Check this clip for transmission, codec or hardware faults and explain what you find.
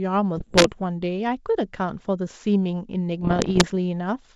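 There are two bursts of bit errors on an ADPCM link, from 0.37 to 0.72 s and from 3.22 to 3.69 s, on speech carried by G.722 wideband coding. Flipped bits, at an error rate of roughly a couple of percent and then about one percent, throw off the decoder's step size and prediction, producing pops, rough bursts and brief level jumps.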